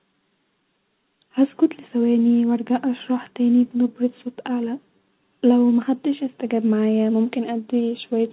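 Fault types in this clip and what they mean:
Nothing stood out on listening to this speech, which comes through a call path with G.711 A-law coding that leaves nothing above 4 kHz.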